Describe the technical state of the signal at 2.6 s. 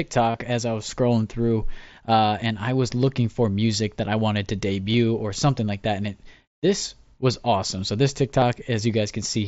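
The audio at 2.6 s is intact, with no fault at that moment.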